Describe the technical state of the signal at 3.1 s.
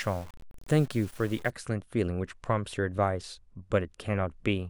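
At 3.1 s the signal is intact, with no dropout, clipping, glitch or other fault audible at that point.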